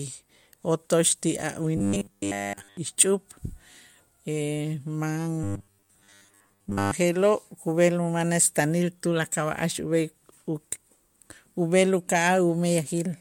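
From 1.77 to 2.77 s the speech collapses into robotic sound from repeated short buffers: a rigid, metallic buzz at 100 Hz that tracks the syllables only loosely, and for that whole stretch. It returns from 5.43 to 6.92 s, covering most of that span. The 100 Hz pitch matches a 10 ms segment being looped, likely because fresh audio arrived too slowly and the output repeated the last buffer while real samples were dropped.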